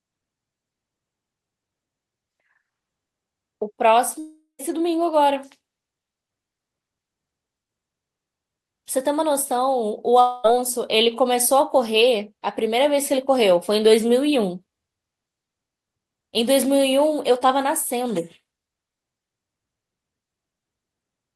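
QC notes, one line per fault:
4.19–4.61 s and 10.21–10.46 s, long network dropout: the speech breaks off and a fading buzzy smear of the last sound stands in. It covers about 0.4 s, then 0.13 s of silence; later about 0.24 s, no silence. Likely lost packets, concealed by extending prior audio.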